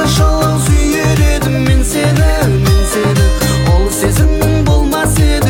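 The player opened an adaptive stream on a low-bitrate version, fitting HE-AAC near 32 kbit/s, so the treble sounds synthetic until a sudden, gapless step up at about 4.0 s.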